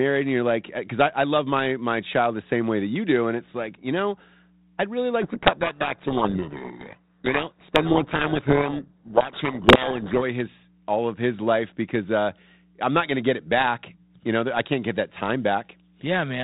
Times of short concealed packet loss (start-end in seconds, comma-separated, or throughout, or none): none